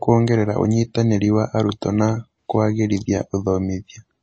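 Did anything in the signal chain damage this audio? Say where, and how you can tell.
Yes. Throughout the speech the sound is watery and swirly, with s sounds turned metallic and nothing above 8.3 kHz. That points to the codec stage, likely MP3 compression at a low bitrate, which fits about 32 kbps: short of bits, the encoder cuts the treble and toggles weak frequency lines frame to frame.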